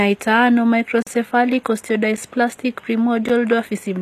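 Across the whole speech clip the treble sounds synthetic: sibilants are gritty and metallic, and nothing is present above 14.9 kHz. The likely cause is HE-AAC compression at a low rate, around 24 kbps, with the treble rebuilt from copied lower bands that do not match the original harmonics.

A block of digital silence runs from 1.02 to 1.07 s, about 43 ms, which fits a 2048-sample buffer left unfilled. The audio drops out abruptly and returns, giving a short hole. A second, briefer block at 3.29 s, about 11 ms, consistent with a 512-sample buffer, is heard as a tick or dip.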